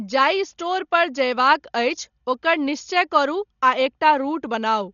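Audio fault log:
Throughout: Dolby Digital compression, likely the cause of the heavy damage here. The speech sounds dull, with nothing above about 6.9 kHz. A rough, fluttering noise clings to the voiced sounds. This fits a very low bitrate of around 40 kbps. At such a rate the encoder narrows the band. Many frequency lines get no mantissa bits at all. The decoder fills those gaps with dither noise, which gives the grainy flutter.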